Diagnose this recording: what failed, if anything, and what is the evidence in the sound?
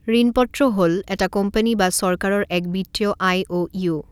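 Nothing in the signal chain has failed, and no stage from capture to playback leaves an audible defect anywhere in the speech recording.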